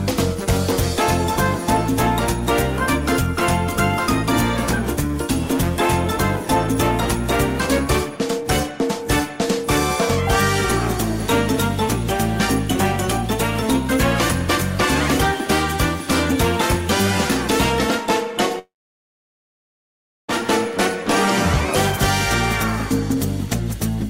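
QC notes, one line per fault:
18.59–20.30 s, long network dropout: the last sound smears into a short fading buzz, then about 1.6 s of silence before audio picks up again, with around 1.7 s of material gone. This is likely a stalled stream, with the receiver briefly papering over the gap before giving up.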